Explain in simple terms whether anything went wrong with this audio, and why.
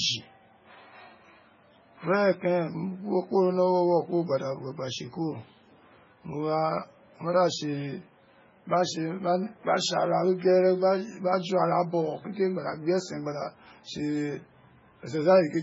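Something did go wrong, and it lasts the whole recording. The speech sounds watery and swirly, as if heard through moving water, and nothing is left above about 7.5 kHz, so s sounds are dull and metallic. This is likely MP3 compression, used heavily. To save space, the encoder dropped the highest frequencies and kept only the parts it judged most audible. The faint details it discarded flicker in and out many times a second, which causes the swirling.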